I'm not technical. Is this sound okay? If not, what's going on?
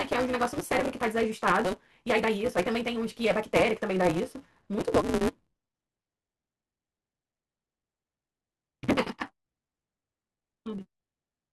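No. A block size mismatch (truncated) runs through the whole clip: each block is cut short, which fits reads of 256 samples, so the speech races along about 1.88 times too fast with its usual timbre, with a steady 188 Hz buzz.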